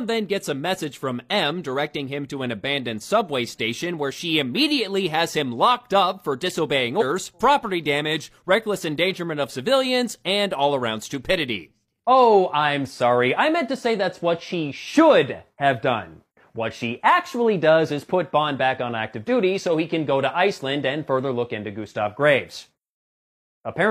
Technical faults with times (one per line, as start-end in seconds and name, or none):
6.97-7.03 damaged data in a compressed stream